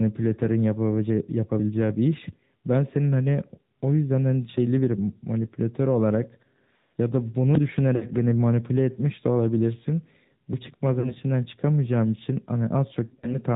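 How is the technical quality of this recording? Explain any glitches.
The recording has clearly reduced quality. It has mobile-codec coloration throughout and three short dropouts.

Throughout, the AMR narrowband mobile codec is plainly audible. Nothing above 4 kHz survives. The buzzy, synthetic texture fits a bitrate around 10.2 kbps.

From 7.96 to 8.06 s, 11.00 to 11.15 s, and 13.06 to 13.37 s, lost AMR speech frames occur. The decoder repeats its last good settings at falling gain, so the sound smears and dips. About 60 ms is lost in the first, and 40 ms in the second. In the third, 100 ms is scattered over 160 ms, in runs of at most 40 ms.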